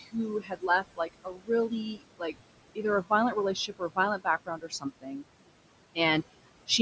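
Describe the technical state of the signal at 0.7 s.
Speech cut by the noise suppressor is underway, spanning 0.4 to 1.5 s, with around 0.7 s of that stretch actually affected. The suppressor misjudged quiet parts of the speech as steady noise and pulled them down with the background, by up to about 21 dB, so soft consonants and endings sound swallowed. Unlike a packet dropout, the sound thins and fades gradually rather than vanishing abruptly into silence.

Noise suppressor artifacts run under this moment too. The suppressor lowers the background by about 21 dB frame by frame, so the residual noise pumps between syllables. This differs from plain room noise, which would stay steady rather than rising and sinking with the speech.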